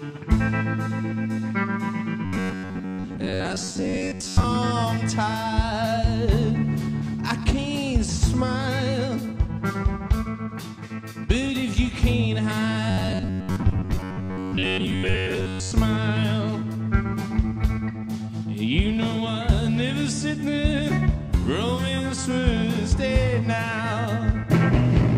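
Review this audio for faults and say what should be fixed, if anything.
Robotic sound from repeated short buffers, 2.25–4.45 s and 12.90–15.73 s: a rigid 93.8 Hz buzz, likely a 10.7 ms block replayed, unlike silent dropouts. Feed playback from a larger, steadier buffer so stale blocks never need repeating.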